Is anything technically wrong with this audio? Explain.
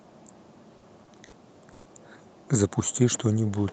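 Yes. The speech has three short stalls from late packets, at 0.77, 1.04 and 1.25 s. Each time the jitter buffer ran dry, so the last sound is held for about 50, 30 and 70 ms, respectively, with a slight buzz or dip before resuming intact.

At 1.72 to 1.87 s there is a call audio freeze. The sound is extended as a fading buzz or hiss for about 130 ms, then continues where it stopped. This is likely caused by packets delayed in transit.

Beneath this, the call path's Opus coding limits the audio to an 8 kHz bandwidth.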